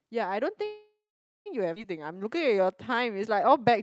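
From 0.65 s to 1.48 s there is a call audio freeze, most likely because packets were held up in transit and the jitter buffer ran dry. The receiver keeps extending the last sound it has, so the speech trails into a fading buzz or hiss that ends in about half a second of silence before the speech resumes exactly where it left off. About 0.8 s of gap has been inserted, with nothing lost.

At 1.76 to 1.78 s comes a skip ahead. A stretch of audio was discarded while later packets were already queued, so playback jumps straight over it. Roughly half a second of speech is gone. The two sides are butted together with only a tiny join, which makes the speech lurch abruptly forward rather than pause.

From 1.98 s to 3.78 s a jitter buffer slow-down is in progress. The buffer was low on reserve or had just raised its target delay, so the receiver repeated single pitch periods and small pieces of pauses over and over to build up a reserve, adding about 158 ms. 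The speech plays at about 92% of its normal rate with the pitch unchanged. Sounds are stretched. Throughout, the Opus call path cuts off everything above 8 kHz, and the coding noise fits a rate around 24 kbps.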